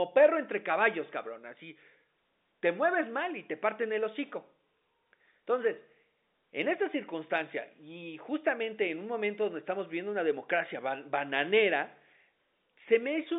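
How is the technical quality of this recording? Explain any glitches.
No glitches stand out in this recording, so there are none to explain.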